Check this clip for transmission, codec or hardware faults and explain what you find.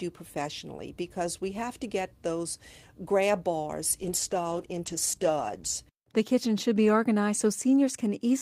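There is one fault. From 4.03 to 5.89 s the sound turns rough and muffled. This is a call bitrate drop: with fewer bits, the encoder codes coarsely and trims the high frequencies, consistent with a fall from about 32 to 14 kbps.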